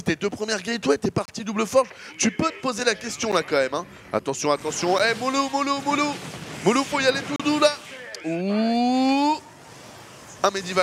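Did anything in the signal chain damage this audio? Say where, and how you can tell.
Yes. Blocks of digital silence at 1.25–1.28 s, 3.32 s, 4.99 s and 7.36–7.40 s point to the driver or buffer stage. The output went to zero without a fade. This fits a buffer that wasn't filled in time.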